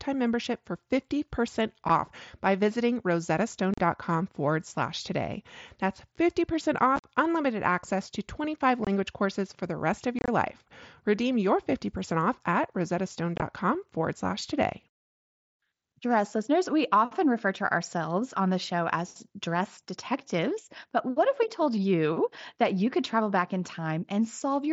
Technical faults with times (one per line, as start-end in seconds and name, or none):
1.89 unconcealed Bluetooth headset packet loss
3.74-3.80 unconcealed Bluetooth headset packet loss
6.96-7.04 unconcealed Bluetooth headset packet loss
8.85-8.87 unconcealed Bluetooth headset packet loss
10.19-10.28 unconcealed Bluetooth headset packet loss
13.36-13.42 unconcealed Bluetooth headset packet loss